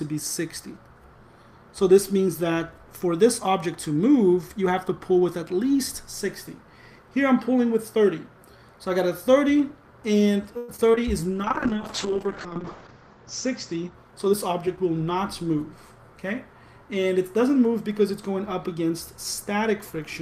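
Repeated packet loss (robotic sound) runs from 10.57 to 10.99 s. Four holes in the stream are patched by stretching the preceding sound, covering about 37% of that span. The longest gap lasts 108 ms, and 60 ms drops out entirely, leaving a choppy stutter.

A call bitrate drop follows from 11.44 to 14.63 s. The encoder is forced to code far more coarsely, and the top end falls from 20 kHz to 8 kHz. That points to a rate falling from around 40 kbps to roughly 7 kbps, bottoming out for about 1.2 s, so the audio turns muffled and watery.

A jitter buffer speed-up overlaps it from 13.82 to 14.77 s. To shrink excess buffered delay, the receiver cuts short pitch-period slices repeatedly, dropping about a tenth of a second in all. Playback runs at 111% speed with unchanged pitch, sounding rushed.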